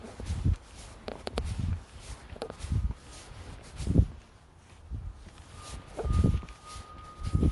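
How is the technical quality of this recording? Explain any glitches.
The technical quality is limited by one fault that runs through the whole recording: MP3 compression. Nothing reaches above 11.3 kHz, so the top end sounds dull. The damage is plainly audible as a watery, swirling texture, metallic chirps on bright sounds and smeared attacks. The likely cause is a heavily squeezed MP3 encode, consistent with a low bitrate around 48 kbps. Short of bits, the encoder discards the treble and zeroes weaker frequency lines, which flicker in and out between frames. A spectrogram would show a flat ceiling at 11.3 kHz and speckled, patchy gaps below it. On the waveform, transients look blurred.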